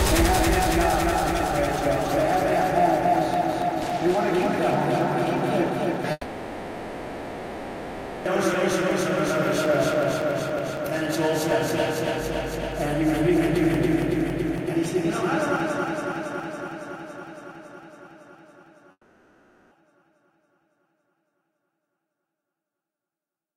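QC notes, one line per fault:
6.11–8.27 s, long network dropout: likely a 2.14 s gap in arriving packets; the last sound is stretched into a fading buzz, then resumes with that stretch lost.
18.91–19.73 s, long network dropout: likely 0.8 s of packets failed to arrive; the receiver smears the last sound into a decaying hiss before audio returns with that part missing.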